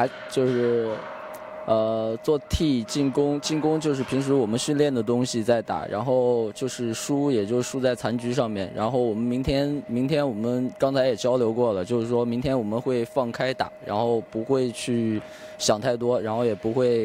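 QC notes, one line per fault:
No faults found. Nothing in the audio calls for a QC note.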